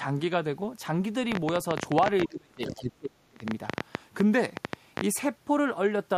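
From 1.32 to 5.02 s, a train of clicks ticks irregularly over the speech, around fifty at 13.5 per second, peaking about 20 dB above it, likely from electrical interference or a faulty connection. Between 2.27 and 3.44 s the speech dips in pieces, falling by as much as 35 dB for about a second in total: speech suppressed in double talk, likely an echo canceller muting the talker while the far side spoke.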